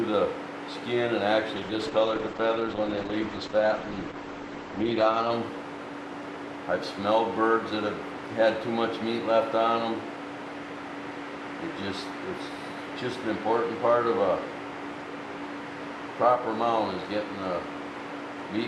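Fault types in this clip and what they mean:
call bitrate drop: the bandwidth estimate fell and the encoder was starved of bits, so from 1.56 to 5.37 s the sound turns coarse and muffled, losing everything above 8 kHz.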